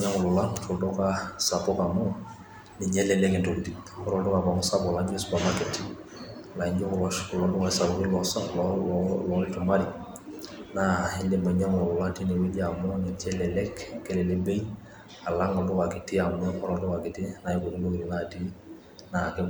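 No technical faults can be heard anywhere in the recording. Nothing in the speech calls for comment on technical grounds.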